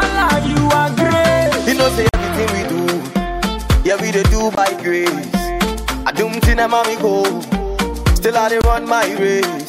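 Blocks of digital silence hit at 2.09 s (46 ms), 4.55 s and 8.62 s (23 ms each). Late buffers drop the audio abruptly to silence, leaving short gaps.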